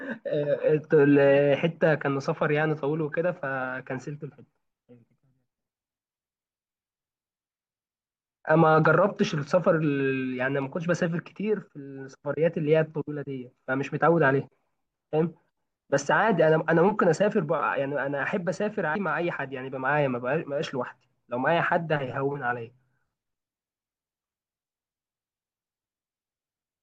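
At 18.94 s the speech jumps forward, losing about 150 ms of sound. These are compressed frames skipped: whole frames went missing or were rejected as damaged, which fits around seven frames of about 21 ms.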